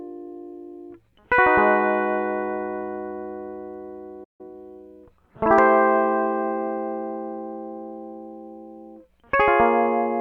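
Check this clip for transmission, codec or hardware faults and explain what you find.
Two related playback faults occur in the middle of the music, one straight after the other.

At 4.24 to 4.41 s there is a playback stall, likely because the player ran out of buffered data or its thread was blocked. The music drops to silence for about 150 ms before resuming.

From 4.41 to 4.55 s there is time-compressed catch-up. The player trims its backlog by cutting and cross-fading tiny slices, so the music rushes at 2x speed with unchanged pitch.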